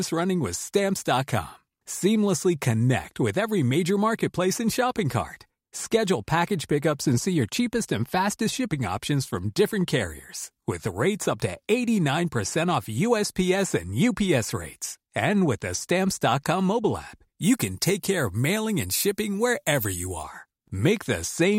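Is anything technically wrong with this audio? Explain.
Yes. From 17.42 to 20.23 s, just after "mobile app", pre-emphasis is left on: a treble boost matching the 50 µs FM curve was never undone. Treble sits about 10 dB hotter at 10 kHz than at 1 kHz, so the speech turns thin, bright and sibilant. A spectrogram shows the upper band distinctly denser there, and the waveform gains spiky, high-frequency detail.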